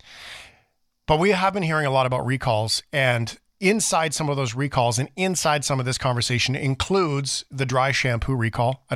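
There are no technical faults to describe in this speech.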